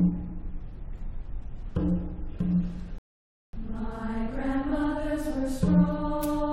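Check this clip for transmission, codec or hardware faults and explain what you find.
One transmission fault stands out: a rebuffering stall. From 2.98 s to 3.53 s the sound drops abruptly to silence, then picks up exactly where it broke off, with nothing skipped. The player had exhausted its downloaded audio and paused until more data arrived, stretching the clip by 0.55 s.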